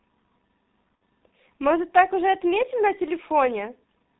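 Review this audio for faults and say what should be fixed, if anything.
The whole clip runs through a heavily compressed G.723.1 codec, consistent with roughly 6.3 kbit/s, leaving speech muffled below 4 kHz, hoarse, with smeared consonants. Use a wideband codec at a higher bitrate.

VoIP packet loss concealed by the speech codec at 0.99 s drops about 60 ms. The decoder extrapolates a fading buzzy tone or coloured noise, and the voice stays weak afterwards. Add jitter buffering and forward error correction.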